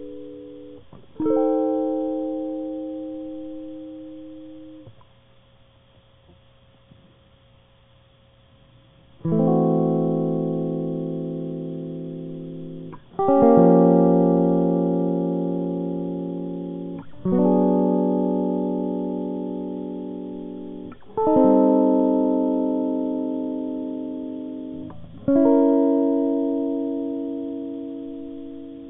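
No technical faults can be heard anywhere in the music.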